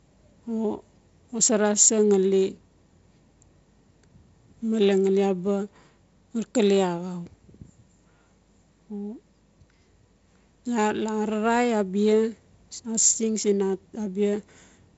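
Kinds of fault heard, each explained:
Nothing here counts as a fault: the speech simply sounds like wideband telephone audio, with nothing above about 7.7 kHz and the light coding grain that fits G.722 at a reduced rate such as 48 kbit/s.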